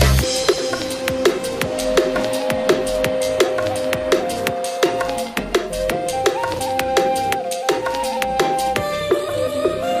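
Frames out of order at 0.48–0.59 s and 6.54–6.59 s: adjacent blocks of about 52 ms and 26 ms swap places, giving a brief garbled flutter. Unlike a dropout, no time is lost.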